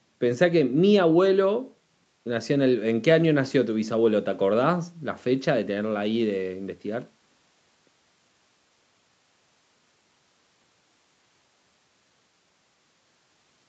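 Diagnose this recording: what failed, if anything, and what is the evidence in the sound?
Nothing stood out on listening to this speech recording; the sound carries no content above about 8 kHz, as expected from a call path of this kind.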